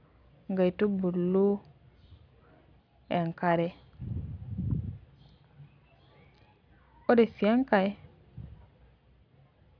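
No technical fault can be heard anywhere in this speech recording, which shows no interruptions, distortion or level problems.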